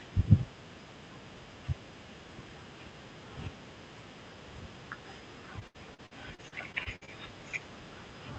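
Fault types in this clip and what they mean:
Repeated packet loss (robotic sound): packets kept going missing, so patched gaps up to 70 ms make the speech choppy and robotic from 5.59 to 7.09 s.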